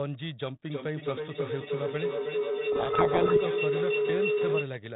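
A speech recording carried over a narrowband telephone-style link, with nothing above 4 kHz and the faint grain of ADPCM coding consistent with 32 kbit/s G.726. From 0.69 s to 4.77 s a feedback howl builds as a microphone-to-loudspeaker loop re-amplifies its own output, each pass gaining level and narrowing toward a tone near 400 Hz that pulses roughly every 300 ms and peaks about 5 dB above the speech. On a spectrogram this shows as a thick horizontal band near 400 Hz, brightening and throbbing at that repeat rate, and the waveform envelope swells in matching pulses. From 2.72 s to 3.38 s a codec payload misread buries the speech in harsh, grinding distortion, because the decoder takes the G.726 code words in the wrong bit order and reconstructs nonsense differences from them. The spectrogram turns to dense, smeared broadband energy across the whole 0–4 kHz band for that stretch, and the waveform becomes ragged and noise-like, with abrupt edges where correct decoding stops and resumes.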